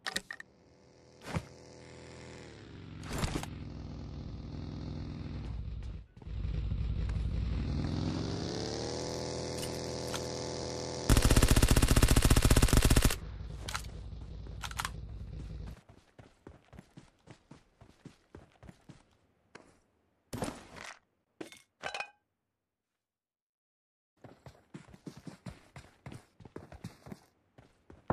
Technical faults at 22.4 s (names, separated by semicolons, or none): none